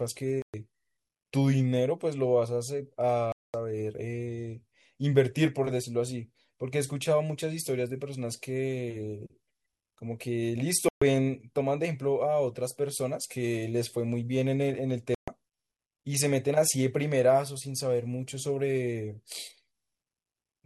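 The speech cuts to silence four times: at 0.42 to 0.54 s, 3.32 to 3.54 s, 10.89 to 11.02 s and 15.15 to 15.28 s, each hole 0.12 to 0.22 s long and sharp-edged, then picks up further along as if it had kept playing. It's likely a Bluetooth dropout, with packets arriving too late and getting discarded.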